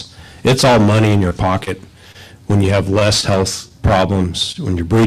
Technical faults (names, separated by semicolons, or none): scattered short gaps; short stall from a late packet